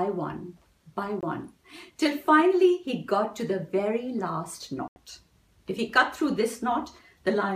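Brief holes cut into the sound at 1.21 s, about 20 ms, and from 4.88 to 4.96 s, about 80 ms, then resume further on, likely a Bluetooth dropout from lost wireless packets.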